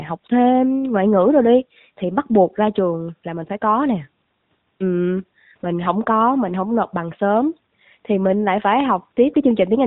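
From start to finish the speech carries AMR narrowband mobile codec damage, plainly audible. Everything above 4 kHz is gone, and the voice has the buzzy, synthetic edge of a vocal-tract model rebuilt from a few pulses per 5 ms. That degree of roughness fits AMR-NB's 10.2 kbps mode. A plain telephone-band filter would only dull the sound; this also adds that coded, artificial grain.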